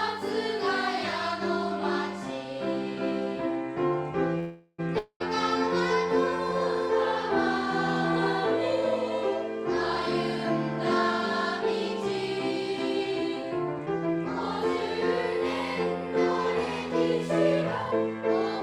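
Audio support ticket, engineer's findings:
Call audio freeze, 4.39 to 4.80 s: last sound stretched into a fading buzz, about 50 ms of silence, then resumes exactly where it stopped. Roughly 390 ms of gap inserted, nothing lost, delay up by 390 ms. Likely cause: packets held in transit, jitter buffer ran dry, receiver concealment filling the wait.

Long network dropout, 4.98 to 5.22 s: similar fading buzz, then about 90 ms of silence; audio returns about 220 ms further on, with that stretch gone for good. Likely cause: packets never arrived, receiver concealment covered the hole but could not recover the missing audio.

Jitter buffer speed-up, 12.06 to 14.16 s: barely audible rush, playback at 102 % with pitch unchanged, around 50 ms trimmed in total. Receiver shortening an overfull buffer by repeatedly cutting pitch-period-sized pieces.

Jitter buffer speed-up, 17.62 to 18.61 s: clearly hurried, 119 % speed at the same pitch, roughly 200 ms cut. 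Same buffer-drain mechanism, much more aggressive, likely after a burst of late packets landed together.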